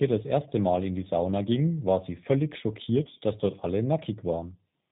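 Throughout, the G.729 codec makes the speech rough and slightly synthetic, consistent with 8 kbit/s coding. The spectrogram is empty above 4 kHz and harmonics look smeared.

From 3.03 to 3.18 s, VoIP packet loss concealed by the speech codec fills about 70 ms of gaps, in runs up to 20 ms over 120 ms. The result is fading, repeated-looking waveform cycles with a buzzy or noisy colour, and the voice is weak or distorted just afterward.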